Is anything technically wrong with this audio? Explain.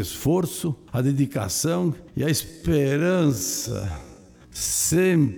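Yes, there's a time-stretched section running from about 2.38 s to the end at 5.38 s. At that point the pace suddenly drops to half speed while the pitch stays put, so the audio drags. That's most likely software stretching the material to fill a set length, holding the pitch steady by repeating short slices of the audio.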